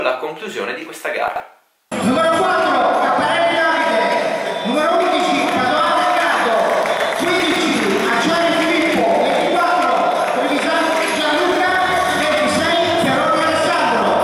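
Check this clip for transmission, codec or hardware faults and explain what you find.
There is one fault, occurring three times. Chunks out of order at 1.28–1.4 s, 7.4–7.56 s and 11.52–11.6 s: a 40 ms block plays one to three blocks late, causing brief jumbled stutters with hard joins.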